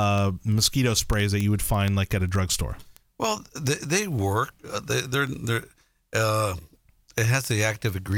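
Speech carries word clock ticks from 0.11 s to 8.12 s: about a hundred sharp, uneven ticks roughly every 70 ms, as an unlocked receiver clock drifting a few hundred ppm drops or repeats one sample each time. Unlike random digital clicks, their rhythm never changes.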